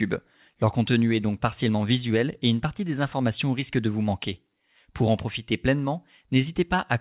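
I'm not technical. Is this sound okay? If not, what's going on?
No, not quite. The main issue is clock drift between sender and receiver. The device sending this speech was running its audio clock a little slow, about 3 percent behind the receiving end. So the receiver kept running short of sound to play and had to stretch things out to avoid gaps. You'd hear that as a faintly uneven pace, with the talking feeling a touch slower than natural rather than obviously broken.

The fix-ups themselves are the repeated timing corrections, running from about 0.07 s to 6.76 s. The receiver kept repeating tiny slivers of sound to stay in step, which adds up to roughly a fifth of a second of extra audio over that stretch, playing at about 97 percent speed. Each repeat is small and unevenly spaced, so they come across as slight hiccups or a wobbly rhythm. The phone-style call line behind it carries nothing above 4 kHz, which gives the narrow, telephone-like sound.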